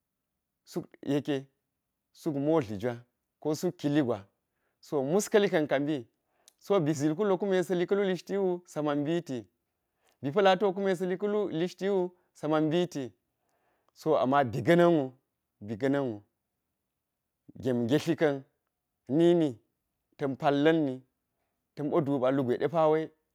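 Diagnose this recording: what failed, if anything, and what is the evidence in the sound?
Nothing failed: there is no evidence in the sound of any fault at any stage.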